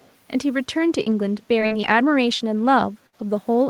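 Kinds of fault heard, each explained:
Echo leak, 0.0 to 0.13 s: A faint delayed copy of the speech, roughly 35 dB below it, returns about 347 ms behind the original. This is likely an echo canceller at the far end that failed to remove what its microphone picked up from a loudspeaker, so the leftover was sent back down the line. It is brief and very quiet here, a trace at the very start rather than a clear repeat.
Repeated packet loss (robotic sound), 1.03 to 1.89 s: Across this stretch of speech, packets go missing four separate times, and each hole is patched by stretching the last bit of sound before the next one arrives. The gaps are short, the longest about 41 ms, with around 100 ms rebuilt in all, roughly a tenth of the span. The quick run of patched holes gives the speech a choppy texture with small pieces missing.
Burst of packet loss, 3.07 to 3.15 s: Here a single run of lost or late audio leaves a hole of about 60 ms. 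The receiver fills it by carrying on the last sound while letting it fade, which comes across as a brief held buzz or a fading hiss rather than the real speech. When the audio picks up again it has jumped ahead, and the 60 ms in between is simply gone.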